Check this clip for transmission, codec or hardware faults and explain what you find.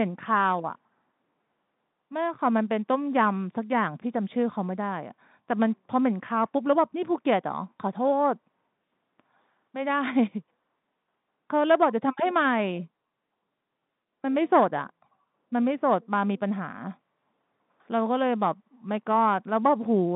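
No transmission, codec or hardware faults turn up in this clip, which carries the usual narrow band of a G.711 telephone line.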